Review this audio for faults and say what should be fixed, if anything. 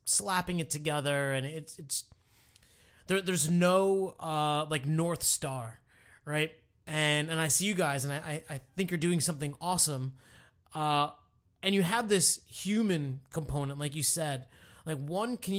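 The sender's audio clock runs about 2% slower than the receiver's, an instance of clock drift between sender and receiver. Samples arrive a little too slowly, so the jitter buffer keeps draining throughout the speech and never settles at a steady fill. The result is a persistent, slight sluggishness in delivery, with recurring small timing hiccups at uneven intervals rather than any single obvious glitch. Preventing it means letting the receiver estimate the drift and resample continuously to match the sender's clock rate.

From 0.24 s to 15.57 s the receiver makes repeated timing corrections to keep pace with that slower sender. Each time the buffer runs low it repeats a short piece of audio, always in the same direction, so playback runs at roughly 98% speed and about 400 ms is added over the stretch. These edits are small and unevenly spaced. Preventing it means replacing discrete repeat-based corrections with smooth adaptive resampling, so timing adjustments stay inaudible.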